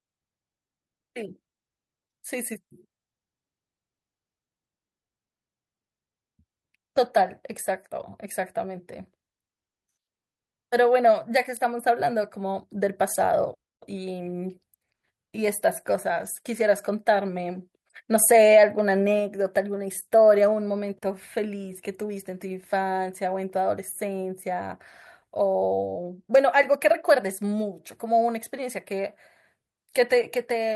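No technical faults can be heard anywhere in the recording.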